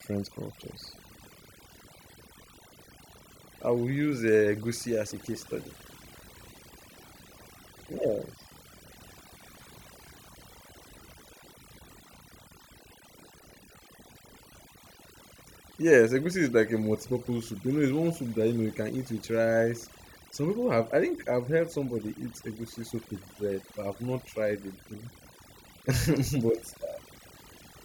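Across the whole clip, overdone noise removal cuts frequency bands near the noise estimate, taking quiet speech detail too, leaving near-silent gaps with twinkling specks.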